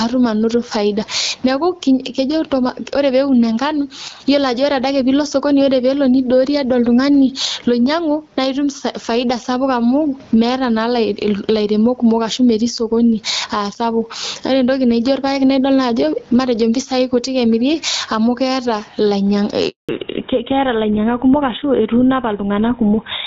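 From the start to the end of the recording the level breathes with gain pumping. The gain is pulled down each time the speech gets loud, a swing of about 15 dB. The likely cause is input gain set far too high, with a fast limiter or compressor pulling it back on each peak. On a waveform the speech peaks sit flattened at a near-constant height. On a spectrogram the background band brightens between phrases and dims under them.

At 19.69 s a handover gap cuts the sound for 200 ms, until 19.89 s. No speech frames arrived while the call moved from one network to another, so the audio fades out within a few tens of milliseconds and then goes silent. Whatever was said in that window is lost. The waveform shows a short flat stretch. The spectrogram shows a narrow vertical blank column across all frequencies.

From 19.89 s to the end, the call has fallen back to narrowband. Nothing is left above 4 kHz, which fits a switch from AMR-WB at 12.65 kbit/s to GSM full rate. 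The speech turns duller and rougher, losing the airy sibilance it had before. On a spectrogram the upper region, which reached toward 7 kHz up to that point, is cut off by a sharp horizontal ceiling at 4 kHz for the rest of the clip.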